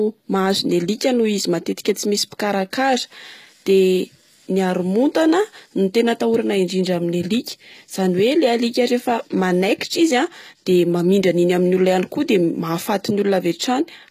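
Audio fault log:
Throughout: HE-AAC compression, likely, since the treble sounds rebuilt from lower bands rather than carried through. The s sounds come out gritty and a bit metallic, everything stops dead at 14.9 kHz, and the damage is plainly audible, which fits a bitrate around 20 kbps.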